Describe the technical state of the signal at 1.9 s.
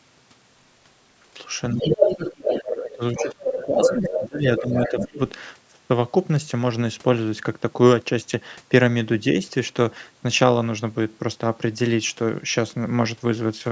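At 1.9 s the talker's speech sinks by about 10 dB, a dip lasting from 1.74 to 2.06 s, roughly a third of a second. This is speech suppressed in double talk. The likely cause is that both ends spoke at once and the echo canceller, unable to tell the near talker apart from the loudspeaker echo, attenuated everything on the microphone path, the wanted voice included.

Over the same moment a second voice sits on top, from 1.81 to 2.65 s, running on past the dip and reaching about the same loudness as the talker. This is the other side's voice leaking through. It is likely residual echo: the far end's speech, played from the device's loudspeaker and picked up again by its microphone, was not fully cancelled before transmission, so it is heard mixed in with the near talker.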